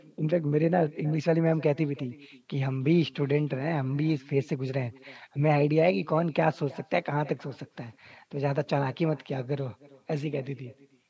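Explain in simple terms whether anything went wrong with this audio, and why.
Something did go wrong: there's an echo with no canceller running through the whole clip. The person on the far end seems to have had the call on a loudspeaker, so their microphone caught this voice coming out of it and sent it straight back. Each bit of speech gets shadowed about a third of a second later by a faint, thin copy. The normal call-style microphone processing, which trims the very top end, isn't a problem.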